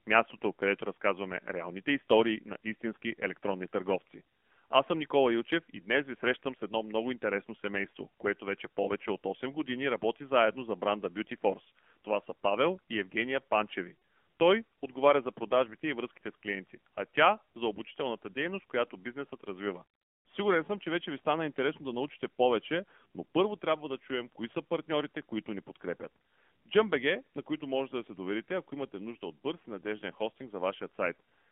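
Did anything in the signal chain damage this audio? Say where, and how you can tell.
Yes. The AMR narrowband mobile codec runs through the whole clip, so the damage comes from the codec stage of a mobile call. The speech sits in a telephone band of roughly 200 Hz to 3.4 kHz, with nothing above it. The voice is plainly buzzy and synthetic, which fits a low AMR-NB mode around 7.4 kbps. At that rate the encoder sends only a coarse vocal-tract model and a few excitation pulses per subframe, so fine detail is rebuilt rather than carried.

Lost AMR speech frames occur at 13.94 s. This happened on the network or radio side. Corrupted frames were thrown out, and the decoder filled the gap by reusing its last good pitch and filter settings at decaying gain. About 80 ms of sound is affected, which fits four consecutive 20 ms frames. It is heard as a smeared, drawn-out stretch that sags toward silence before the speech resumes briefly weak and rough.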